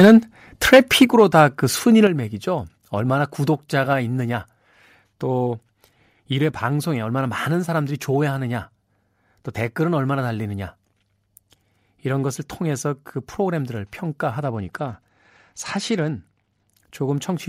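From 0.0 to 0.15 s the opening of the speech suffers microphone overload. The input gain was likely set so high that peaks ran about 7 dB past what the converter can represent, so their tops are sheared flat. Roughly a tenth of the samples in that stretch are clipped, which gives a harsh, crackly edge. At 0.05 s, inside that burst, the level drops by about 2 dB in a single step.

The clipping returns from 0.65 to 1.4 s, again about 7 dB over full scale but touching only a small share of samples, so the crackle is more intermittent. These level drops are microphone volume stepped down, most likely the call software reacting to the distorted peaks by lowering the device's input volume. Within this second burst the level falls by about 6 dB at 1.05 s; after it, the level drops another 6 dB at 2.07 s and falls a further 2 dB at 3.93 s. Each step pulls the speech and the background noise down together, abruptly rather than as a fade.

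From 14.42 to 16.75 s there is a Bluetooth SBC bit pool drop. The wireless link cut the encoder's bit allocation to keep audio flowing, consistent with the bit pool falling from 31 to 12 and the stream dropping to around 88 kbps. With so few bits the upper sub-bands are starved and the rest are coarsely quantised, so the treble goes dull and a gritty noise sits on the speech until the rate recovers.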